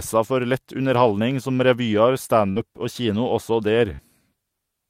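At 2.51 s and again at 3.96 s, short concealed packet loss: about 40 ms of the speech arrived too late, and the decoder extended the preceding sound for roughly 43 ms and then 30 ms. Each is heard as a brief smear rather than a silent dropout or hard click.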